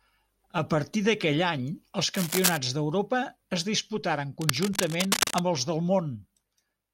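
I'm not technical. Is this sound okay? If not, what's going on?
No. Cable scratch noise occurs twice: from 2.14 to 2.57 s, just after "partir d'aquell any els", about as loud as the speech, and from 4.41 to 5.39 s, after "es disputaren", a little quieter. Both are scratchy rustling bursts, likely from a worn cable or connector moving.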